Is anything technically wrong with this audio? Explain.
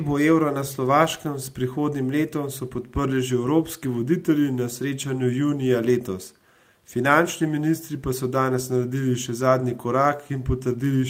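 No, nothing is technically wrong with this audio.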